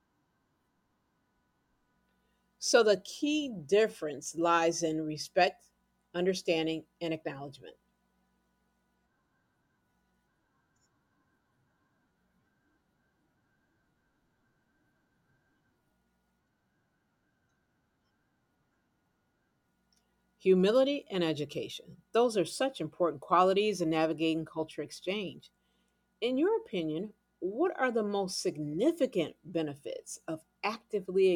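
No technical faults are audible anywhere in the recording.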